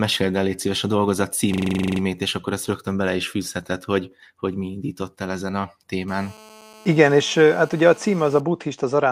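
System hang loop, 1.54 to 2.01 s: the computer or driver stalled while the sound hardware kept replaying its ring buffer, so one 42.67 ms slice, which fits a 2048-sample buffer, repeats 11 times at 23.4 Hz. It sounds like a machine-gun stutter.

GSM phone buzz, 6.08 to 8.40 s: a nearby 2G phone on a call transmits in 217 Hz bursts, which the audio circuitry rectifies into a steady, raspy 217 Hz buzz rich in harmonics. It sits about 25 dB below the speech and is unrelated to it.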